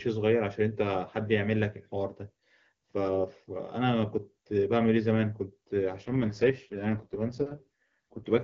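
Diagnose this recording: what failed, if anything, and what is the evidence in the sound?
AMR rate drop, 6.01 to 8.26 s, at the network and codec stage: the speech turns rough and synthetic while the band stays intact and nothing cuts out, which fits the HD Voice link switching from 23.85 kbit/s to about 6.6 kbit/s, spending bits on error protection over a weak radio link.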